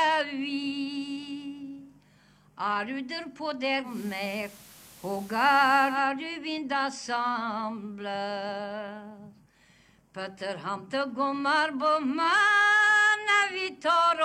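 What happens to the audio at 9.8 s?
Nothing goes wrong at 9.8 s; the audio carries straight through that moment with no audible fault.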